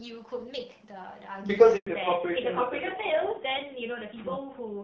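At 1.77 s the speech cuts out for 100 ms in a handover gap: the call was being passed between networks, no speech frames arrived during the switch, and the audio decays quickly into silence until the new link picks up at 1.87 s.

From 1.87 s to the end there is a fallback to narrowband. Everything above 4 kHz disappears, and the speech turns duller and rougher than the clear, lightly coded HD Voice before it, which points to a drop from AMR-WB to AMR-NB.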